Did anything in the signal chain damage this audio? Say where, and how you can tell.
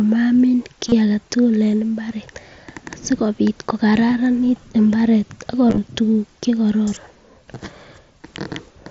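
Yes, on the Bluetooth radio link between headset and phone, which dropped voice packets twice: concealed Bluetooth headset packet loss. About 30 ms went missing at 0.89–0.92 s, and 60 ms more scattered across 5.66–5.78 s in runs no longer than 15 ms. The receiver filled each gap by repeating the best-matching stretch of the waveform just before it, so rather than silence, runs of lost packets are heard as a brief buzzy tone held at full level, with a small warble where real audio returns, over the otherwise wideband mSBC-coded sound.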